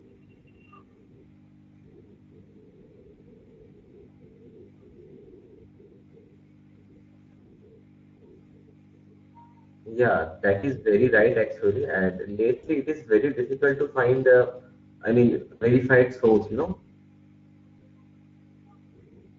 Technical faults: Speex codec; VoIP packet loss concealed by the speech codec

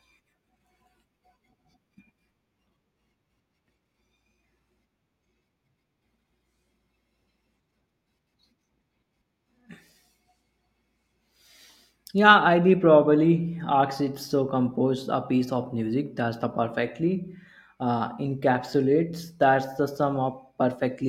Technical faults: none

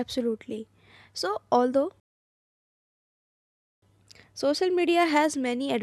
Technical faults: video or display buzz; rebuffering stall

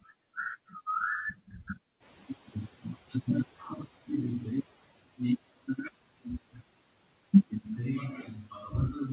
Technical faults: noise suppressor catching up

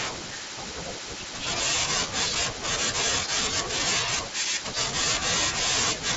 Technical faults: concealed Bluetooth headset packet loss

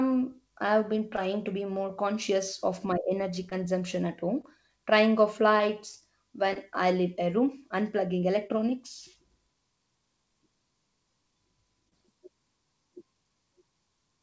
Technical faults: short concealed packet loss

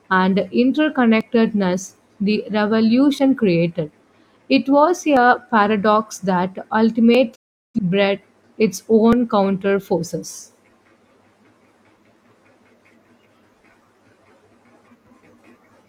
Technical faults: audio missing between chunks; digital broadcast dropout

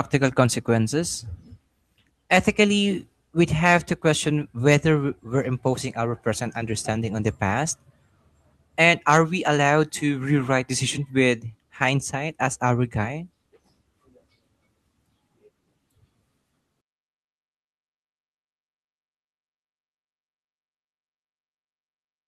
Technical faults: none

